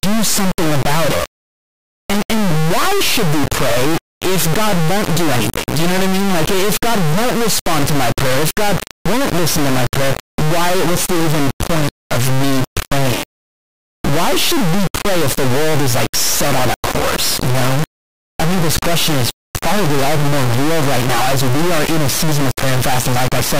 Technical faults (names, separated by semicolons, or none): integer read as float